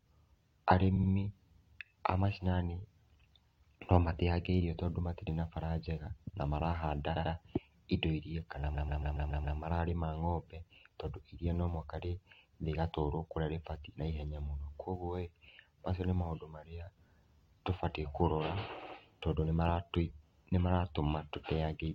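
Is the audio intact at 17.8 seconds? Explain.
Yes, at 17.8 seconds the speech plays through cleanly, with no dropout, click, distortion or other audible fault.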